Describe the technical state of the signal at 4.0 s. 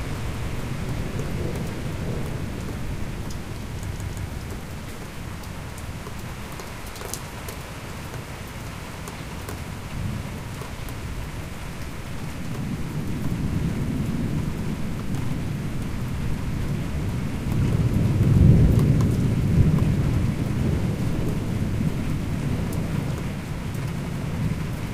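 At 4.0 s the playback device hit a repeated buffer: fresh audio failed to arrive in time, so it replayed the block it already held, twice more, from 3.93 to 4.27 s. Each repeat is about 170 ms long, which fits an 8192-sample buffer. The same slice of sound is heard three times in a row with a hard join at each restart, giving a short stutter. Essentially nothing is dropped; the sound is held back, not cut.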